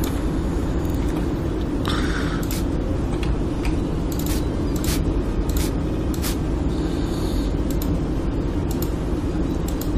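At 0.85 s and again at 5.91 s, repeated frames: a short compressed block, about 46 ms then 70 ms, plays twice more, stuttering and adding roughly 93 ms and 139 ms.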